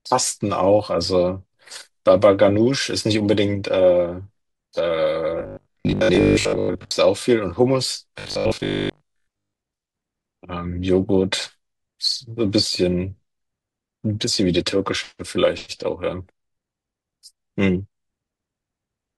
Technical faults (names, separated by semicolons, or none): robotic sound from repeated short buffers